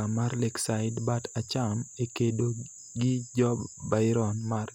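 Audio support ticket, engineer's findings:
No technical faults found.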